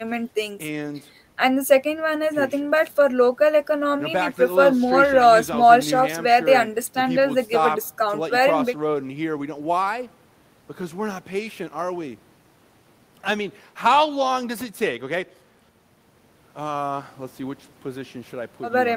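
No technical faults can be heard at any point in the speech, so there is nothing to describe in time order.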